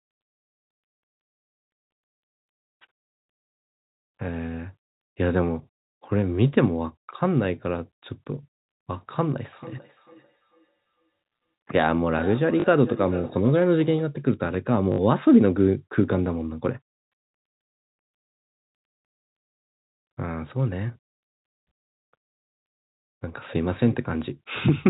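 Right at the start, from 0.38 to 0.66 s, there's packet loss with the last packet repeated. About 200 ms of audio goes missing, scattered over that 280 ms stretch, and the longest gap is 60 ms. The receiver just replays the last chunk it got, and the loops don't line up with the pitch, so you get a brief robotic stutter with a buzzy edge, which fits 20 ms packets.

From 9.52 to 14.2 s there's feedback echo between two devices: a second device in the same room is replaying the call, and its sound leaks back into the other microphone. The speech comes round again roughly every 0.4 s, thinner and ringier each pass, peaking about 17 dB below the speech, with the narrowband telephone sound of the G.711 line on top. Inside that stretch, at 12.6 s, a 40 ms repeated-packet stutter pops up, and another 60 ms one follows at 14.92 s, just after the echo ends.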